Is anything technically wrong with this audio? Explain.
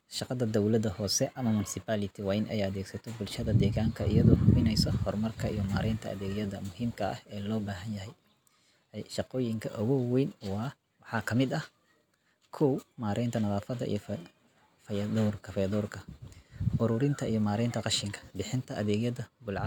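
No, the recording carries no audible technical fault, and its level, timing and continuity hold steady throughout.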